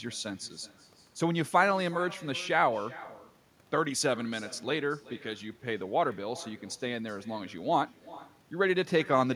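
From start to finish, every phrase is trailed by a faint, hollow copy of itself arriving a little under half a second later, about 21 dB below the direct speech. This is echo with no canceller: the far end is playing the call through a loudspeaker, its microphone catches that playback, and nothing strips it out, so the speech returns after the network round trip as a thin, delayed shadow.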